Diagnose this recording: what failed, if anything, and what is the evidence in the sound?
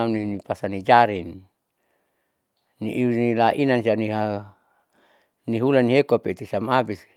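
Nothing in this speech recording points to a failure at any stage of the chain, from capture through to playback.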